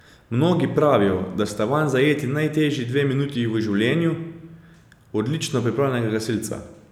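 Nothing in the speech signal departs from normal, with no dropouts, distortion, level jumps or timing disturbances anywhere in the recording.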